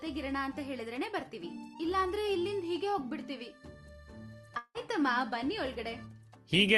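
The audio has one clear break from about 4.57 to 4.78 s, most likely a long network dropout. At the gap the last sound is stretched into a fading tail of roughly 173 ms, then about 60 ms of near silence, before the audio resumes with about 180 ms of material simply gone. The receiver's concealment filled the hole rather than playing anything real. The audio passes through a call codec path with content up to 12 kHz, consistent with Opus at around 32 kbps.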